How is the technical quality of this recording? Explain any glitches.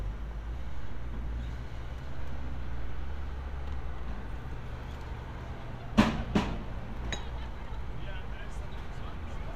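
Nothing stood out on listening; the recording presents no audible glitches to explain.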